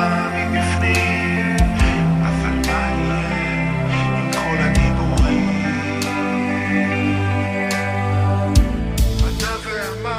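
No faults detected anywhere in the clip.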